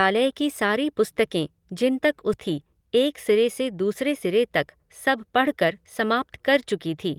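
This speech clip has a skip ahead between 2.33 and 2.35 s. Around 0.7 s of audio just vanishes, with no fill, and the talk on either side of the jump butts almost straight together. That's a chunk dropped, in transit or by the jitter buffer, while later audio was already queued. Right after, from 2.49 to 3.73 s, there's a jitter buffer speed-up. Playback runs about 4% fast at unchanged pitch as the receiver trims tiny pitch-period slices, shaving roughly 50 ms in all to pull the buffered delay back down.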